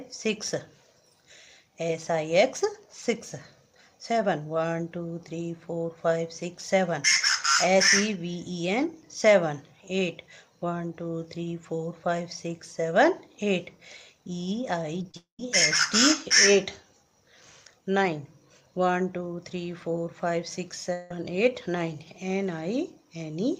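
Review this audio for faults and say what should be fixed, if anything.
Short concealed packet loss occurs at 14.99 s, 15.03–15.05 s and 15.11–15.15 s. Gaps of 10 to 30 ms were patched by extending the preceding sound, so each one is heard as a brief smear or wobble. On a spectrogram they appear as thin, blurred vertical seams where the fine detail briefly freezes. A larger jitter buffer or forward error correction on the link would prevent them.

Long network dropouts occur at 15.17–15.40 s and 20.93–21.11 s, likely from packets failing to arrive for a sustained stretch. In the first, the last sound is carried on as a fading buzz, then about 120 ms of silence follows before the audio returns with a portion missing. The second is a fading fill of about 175 ms with no silence, and the audio again resumes with material lost. A waveform shows a decaying, uniform-textured stretch there, and a spectrogram shows a smeared band, followed in the first case by a blank gap. 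A more stable network path, or redundancy and retransmission for bursts of loss, would prevent them.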